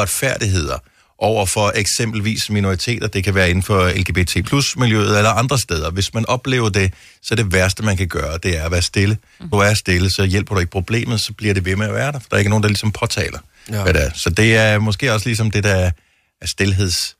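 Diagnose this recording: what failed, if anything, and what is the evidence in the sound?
The failure sits in the codec stage: damaged data in a compressed stream. At about 9.52 s, between "er at være stille" and "er stille så hjælper", a brief glitch cuts through the speech. The corrupted bytes left the decoder unable to parse those frames. It lost sync, discarded data while searching for the next valid frame header, and resumed a fraction later.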